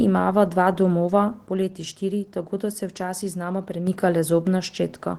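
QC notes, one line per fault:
Throughout: Opus voice compression. The speech sounds coarse and slightly robotic, with audible coding damage. The band still reaches about 20 kHz, consistent with a hybrid mode near 16 kbps.
1.47–3.87 s: one channel drops out, likely, just after "imava dva domova". The level falls abruptly by about 6 dB, as though only one stereo side remains.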